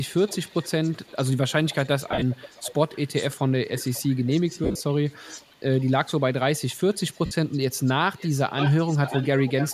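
A faint delayed copy of the speech trails the talker from 0.17 to 1.32 s, about 25 dB below it and roughly half a second late (516 ms). This is an echo leak, likely from a far end on loudspeaker whose echo canceller let part of its microphone pickup return down the line. It comes back from 1.66 to 3.34 s at about -20 dB and a 526 ms delay.

Inside that stretch, from 2.11 to 2.23 s, the sound turns into a brief noisy smear. This is lost LE Audio frames: about 90 ms went missing across 105 ms, with the longest gap near 50 ms. The LC3 decoder covered each gap by reusing the last spectrum with scrambled phase, which fits a 7.5 ms frame size.

The echo returns from 3.77 to 5.54 s, about 20 dB down and 539 ms late. A second frame loss at 4.64 to 4.81 s smears about 127.5 ms of sound spread over 165 ms.

A faint scrap of echo appears at 6.70 to 6.75 s, about 35 dB down. From 7.08 s to the end the echo is much stronger, only about 10 dB under the speech, and its delay has grown to 562 ms. 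Within it, a 52.5 ms frame loss at 7.26 to 7.31 s adds one more short noisy patch.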